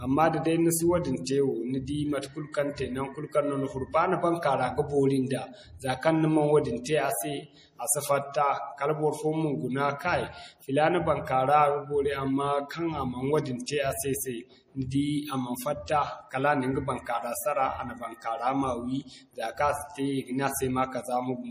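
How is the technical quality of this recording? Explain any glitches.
The quality is rough: there's plainly audible codec damage across the whole 21 seconds, plus one short pre-echo near the start.

The compression damage runs throughout. Nothing comes through above 15.3 kHz, and the speech has that watery, swirly texture with smeared edges. That's most likely MP3 compression at a low bitrate, around 40 kbps: the encoder chops the treble and drops weak frequency detail that flickers between frames.

At 1.24 to 1.27 s there's a pre-echo, a short hiss for about 25 ms just before a sharp onset. The codec spreads its noise across a whole block, so noise meant for the loud attack leaks into the quiet moment ahead of it, softening the hit.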